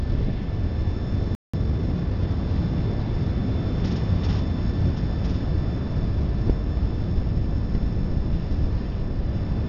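At 1.35 s the sound halts for about 185 ms, a playback stall likely caused by the player running short of data. From 1.54 to 2.28 s comes a time-compressed catch-up: the backlog is played about 1.25 times faster with short cross-faded cuts, so it sounds hurried but with no pitch rise.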